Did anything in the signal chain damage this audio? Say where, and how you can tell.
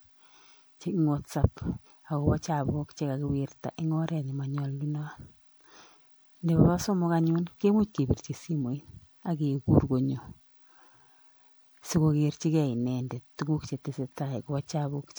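Yes: the codec stage likely re-encoded this speech repeatedly, generation loss from about seven MP3 passes near 96 kbit/s, leaving swirly, hollow, smeared sound with blurred attacks throughout.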